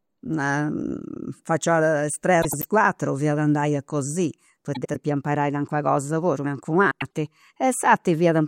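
Frames out of order at 2.42 to 2.66 s, 4.75 to 4.96 s and 6.91 to 7.08 s. Adjacent runs of about 96 ms play swapped, giving a garbled flutter.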